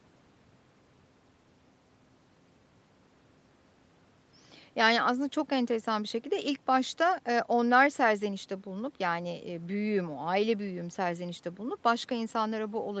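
No faults are audible in the speech; the top end stops at 8 kHz as expected for a wideband call path, and the coding texture fits Opus at around 24 kbps.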